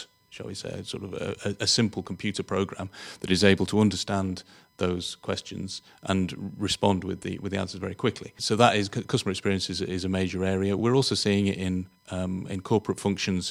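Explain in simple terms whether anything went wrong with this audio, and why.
USB whine runs through the whole recording: a faint, steady high tone at 1 kHz sits underneath the speech from start to finish. The USB connection pulls power in regular one-millisecond bursts, and that rhythm leaked into the audio as a fixed-pitch hum.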